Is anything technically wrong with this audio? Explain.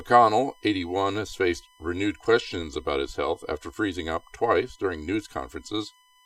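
Yes, there are two faults, both present throughout the speech.

USB whine: a steady 1 kHz tone, about 35 dB below the signal, from USB millisecond-frame current leaking into power or ground. Its 1 kHz pitch, far above 50 or 60 Hz, separates it from mains hum.

Channel delay (comb filtering): one channel lags roughly 3 ms, so the mono sum cancels at regularly spaced frequencies starting near 200 Hz, giving a hollow tone, unlike a single notch.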